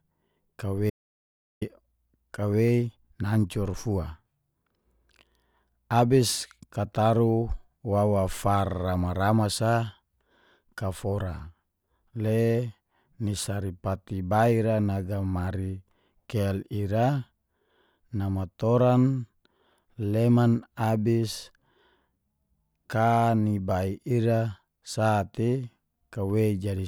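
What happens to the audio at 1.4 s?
The speech cuts out to dead silence, with no room tone, from 0.9 to 1.62 s: an audio dropout to silence, likely from the input being briefly lost.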